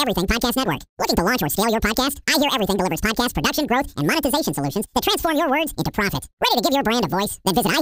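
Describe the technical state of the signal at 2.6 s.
At 2.6 s, as throughout, the audio is read two samples at a time, taking sample pairs as single frames, so the speech runs at double speed, an octave higher.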